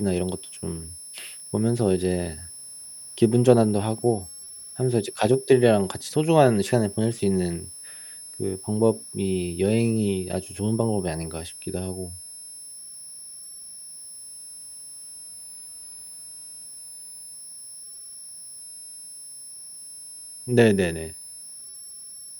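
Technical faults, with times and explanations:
Throughout: switching supply whistle. A switching power supply in the chain is cycling at an audible rate, leaking a thin, high whistle under the speech, wandering between about 5.2 and 5.4 kHz and sitting roughly 20 dB below it.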